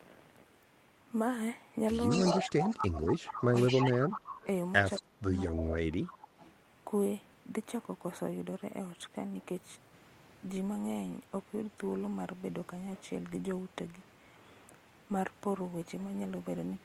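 From 2.09 to 2.48 s there is an echo leak. A copy of the speech returns about 219 ms late, only about 5 dB below the direct sound. The likely cause is a far-end loudspeaker whose echo canceller let part of its microphone pickup through. At 2.47 s speech suppressed in double talk begins and runs to 3.45 s. The level sinks by around 20 dB for roughly a second. This is likely the canceller ducking the talker while treating the overlap as echo. The echo returns from 2.7 to 4.46 s, now about 10 dB down. A short scrap follows from 4.96 to 5.02 s at about 15 dB down. From 4.97 to 5.74 s the speech is suppressed again, dropping by around 25 dB. Faint echo fragments close the sequence at 6.05 to 6.17 s, about 25 dB down, and at 6.39 to 6.49 s, about 30 dB down. All echoes share the 219 ms delay.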